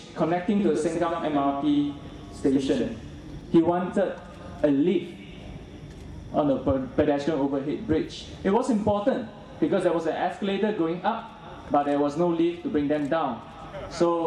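From 0.59 to 3.41 s, a doubled audio track: a second, dry copy trails about a tenth of a second behind, roughly 5 dB quieter. Likely a slower parallel capture path.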